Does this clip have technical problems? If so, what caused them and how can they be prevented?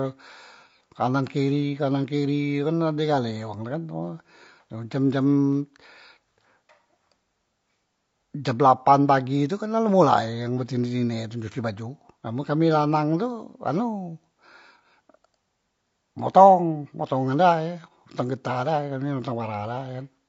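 Yes. Throughout the speech, the likely cause is low-delay AAC compression (AAC-ELD). Its short frames resolve pitch harmonics poorly and spend bits inefficiently, and at a rate that fits about 32 kbps the damage is plainly audible as rough, grainy voicing. Raising the bitrate, or using a standard-delay codec where latency permits, would prevent it.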